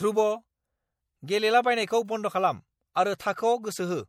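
Throughout the speech there is plainly audible damage of the kind that MP3 compression produces, at a level that fits a bitrate around 64 kbps. The codec divides the signal into 576 frequency lines per frame. When bits run short it discards the weaker lines, which then drop in and out from one frame to the next. That gives the voice a watery, swirly texture, metallic chirping on sibilants, and smeared onsets. Lossy encoding is the likely cause.

At 2.06 s a bit error spike occurs. A single sample is knocked off its true value by a power of two and returns immediately. A flipped bit in memory or on a digital link causes this. The result is one sharp, broadband tick with no relation to the speech around it.

At 3.18 s there is pre-echo lasting about 19 ms. A sharp attack falls late in a transform block, and the codec spreads quantisation noise sized for that loud moment across the whole block. 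This includes the quieter stretch just before it. The onset is therefore preceded by a brief hiss, and the attack itself sounds softened and smeared.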